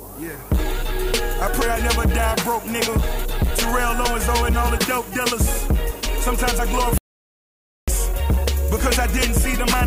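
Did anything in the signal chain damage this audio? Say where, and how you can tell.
Yes. A steady, thin hiss runs through the whole clip and climbs sharply toward the top of the band, sitting only about 20 dB below the sound. That is low bit depth with noise shaping from sample-format conversion: reduction to about 7 bits, with rounding error pushed upward.

From 6.98 s to 7.88 s the audio cuts to silence with no room tone, losing about 0.9 s. That is an audio dropout to silence, most likely at the input, driver or buffer stage: the source was lost and zeros were written.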